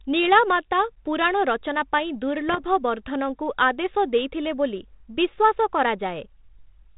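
Just after "ନୀଳାମାତା ପୁରାଣ ରଚନା ପାଇଁ", from 2.49 to 2.59 s, bit errors on an ADPCM link give a rough, popping burst with brief jumps in level. Each flipped bit, at roughly 0.4 percent, throws off the decoder's step size and prediction, so the error smears on for milliseconds instead of a single click. Unlike a packet dropout, the speech never goes silent. The 32 kbit/s G.726 path, band-limited below 4 kHz, carries a light grain.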